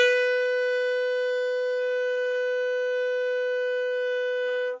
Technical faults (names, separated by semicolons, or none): none